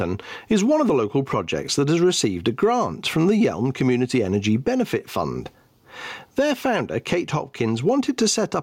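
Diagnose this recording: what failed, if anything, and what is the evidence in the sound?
Gain pumping runs through the whole clip. The gain swings around 15 dB, squashing loud and soft parts closer in level. Likely excessive input gain driving a fast limiter.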